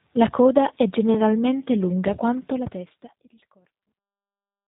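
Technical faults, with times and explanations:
Throughout, G.729 codec. The speech has a rough, slightly synthetic edge, and the damage is plainly audible. Nothing reaches above 4 kHz, so sibilants and breath lose their bite and the sound turns muffled. That fits an 8 kbit/s coder that rebuilds each 10 ms frame from a vocal tract filter, a pitch predictor and a few pulses. It does not keep the actual waveform. The smooth fade-out from about two and a half seconds to 4.68 s carries the same coloured sound.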